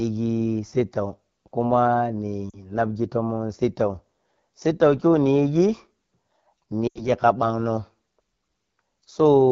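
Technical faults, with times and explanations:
Throughout, AMR wideband (HD Voice) codec: at 8.85 kbit/s, one of the two lowest wideband rates, the pulse-driven vocal tract model has too few bits, so speech sounds plainly rough and raspy, with a thin, noise-like top band from 6.4 to 7 kHz.
2.50–2.57 s and 6.87–7.10 s, lost AMR speech frames: the decoder replays the last good pitch and vocal tract settings at falling gain. The first 40 ms gap, which fits two 20 ms frames, drops to near silence. The second, about 80 ms, drops to near silence within two frames before the voice returns rough.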